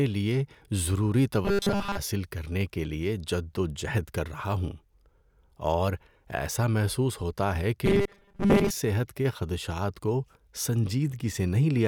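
Audio likely arrived too seldom, so 5 ms chunks were looped, causing robotic sound from repeated short buffers: a rigid 200 Hz buzz at 1.45–1.98 s and 7.86–8.70 s.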